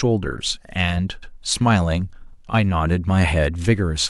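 At 1.22 s to 1.32 s the speech stutters from repeated frames: a 104.5 ms block, consistent with a run of four compressed frames, was stored or transmitted twice. The decoder replays that stretch once more, lengthening the clip by 104.5 ms.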